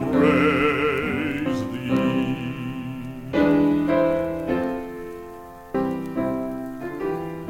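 Compressed frames skipped at 1.46 s and again at 5.74 s: the music jumps forward by roughly 150 ms each time, which fits a handful of 32 ms frames never being decoded.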